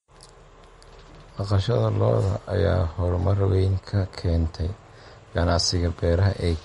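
Throughout the recording, the speech has most likely passed through low-bitrate MP3 compression, with the damage pointing to something around 48 kbps. Short of bits, the encoder has cut everything above 11.2 kHz and dropped weak frequency components that flicker in and out from one frame to the next. The result is plainly audible: dull, capped treble, a watery, swirling texture on the voice, metallic chirping on s sounds, and consonant attacks that smear.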